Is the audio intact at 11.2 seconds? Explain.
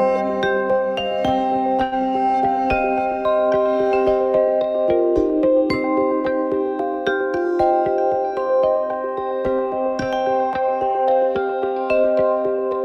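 Yes, the audio is intact at 11.2 seconds, with no dropout, glitch or other fault at that moment.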